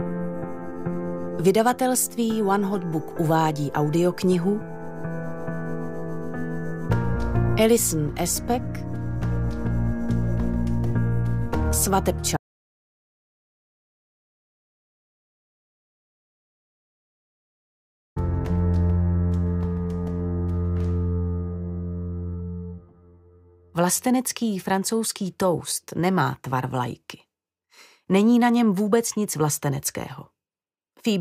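At 12.37 s the sound drops out to dead silence, no room tone at all, until 18.16 s. That's an audio dropout to silence, likely a lost input.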